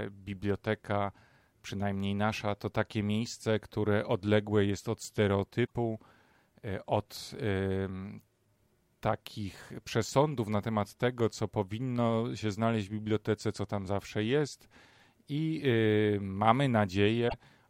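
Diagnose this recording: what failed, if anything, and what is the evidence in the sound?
Codec stage: damaged data in the compressed stream gives brief glitches at 5.63 s and 17.26 s, each about 0.08 s, as the decoder loses frame sync and resynchronises.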